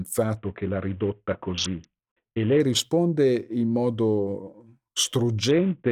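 From 0.37 to 2.60 s, just before "risponde in", the speech turns dull and loses its treble while a gritty, grainy noise rises under it; the same happens again from 5.51 s to the end. Both are a Bluetooth SBC bit pool drop: the link starved the encoder, so the upper sub-bands got almost no bits and the rest were coarsely quantised. The sound fits a bit pool falling from 28 to 5, near 54 kbps.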